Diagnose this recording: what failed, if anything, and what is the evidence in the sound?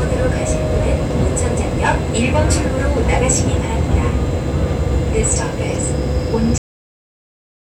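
The failure is at the storage or buffer stage: the final buffers of the recording were never written out, producing a cut-off end. At 6.58 s the sound stops abruptly in the middle of an event, with no decay, and the remaining 1.2 s until the end of the file is digital silence. Because the data ends mid-stream rather than closing gracefully, the waveform simply halts wherever the last completed buffer happened to finish.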